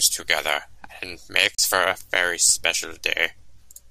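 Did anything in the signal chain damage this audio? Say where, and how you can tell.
Yes. At 1.55 s, right after "together and", the speech cuts abruptly to silence with a very fast fade of about 3 ms. About 32 ms later it comes back at 1.59 s on "for a very special". This is a digital broadcast dropout at the reception and decoding stage. A corrupted or missing frame failed its check, so the receiver muted rather than output garbage. The gap's length fits a single lost frame, and that sound is unrecoverable.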